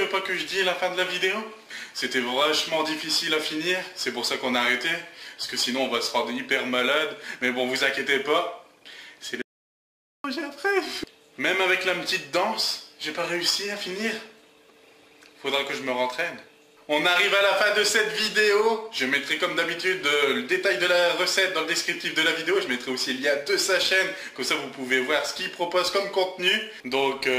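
The input feeding this recording was likely lost for a moment, whether through a disconnected device, a failed link or a stray mute, while the recorder kept writing silence. The result is an audio dropout to silence from 9.42 s to 10.24 s: the sound cuts off mid-flow, about 0.83 s passes with no room tone at all, and then it resumes abruptly. Whatever occurred in that gap is missing from the clip.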